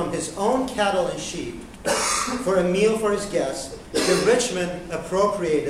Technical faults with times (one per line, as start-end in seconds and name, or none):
none